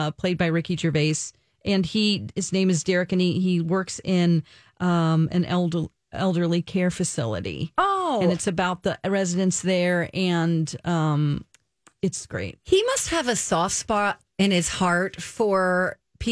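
Nothing in the speech stood out as a technical problem on listening.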